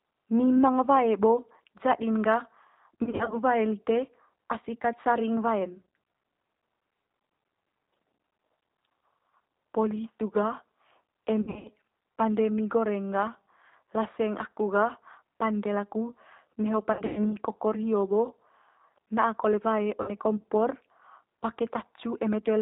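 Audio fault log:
throughout: G.729 codec. Speech is confined below 4 kHz and sounds slightly rough and synthetic, because it is rebuilt from a vocal-tract filter, pitch and pulses. That is a synthetic texture, not a plain muffling.
3.04–3.37 s, 11.41–11.69 s (before "pande mi goreng gah"), 16.93–17.37 s (between "gah pande laku neho" and "kokor hio bo"), 20.02–20.11 s (after "na'a kole wae"): VoIP packet loss concealed by the speech codec. The lost speech is stretched into a fading buzzy tone or coloured noise that stays weak briefly afterwards, not a clean silent dropout.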